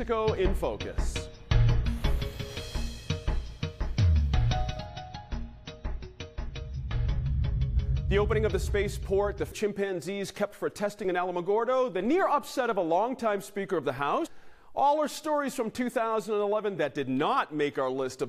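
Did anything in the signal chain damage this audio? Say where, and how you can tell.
Yes, audio missing between chunks: jumps at 9.52 and 14.27 s each skip about a third of a second, likely from the buffer dropping audio between 5-second chunks.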